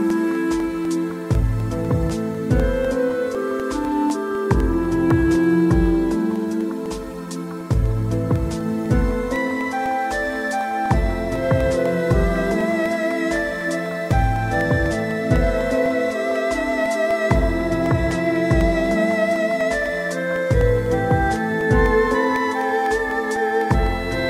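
From 0.10 s to 24.11 s the audio has periodic USB or driver dropouts. Every 0.25 s, about a millisecond of sound drops out and is replaced by silence. Something blocks the USB bus or driver at that steady interval. The result is a regular ticking, four times a second, heard wherever there is signal.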